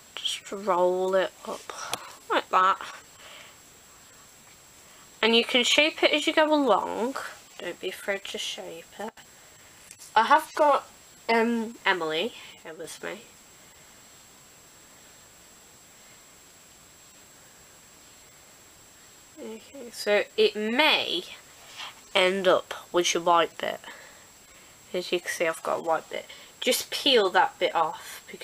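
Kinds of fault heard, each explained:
Sudden gain jump: the level of the sound and its background noise drops abruptly together, by about 16 dB from 9.09 to 9.17 s and by about 6 dB from 12.63 to 12.84 s, with no fade in or out at either edge. The likely cause is a digital gain setting being switched between one sample and the next without a ramp, so everything in the signal shifts level at the same instant.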